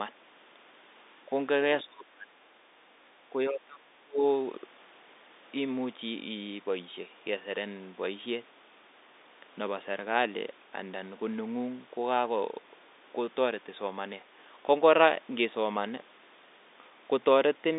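At 1.84 to 2.49 s, 3.3 to 3.81 s and 4.0 to 4.24 s the speech sinks abruptly and comes back, dropping by about 30 dB, about 20 dB and about 30 dB respectively. This is speech suppressed in double talk: the echo canceller, likely meeting simultaneous far-end talk, failed to separate the local talker from loudspeaker echo and attenuated both. Over the narrowband telephone line, which stops near 3.8 kHz, the words thin out and partly vanish.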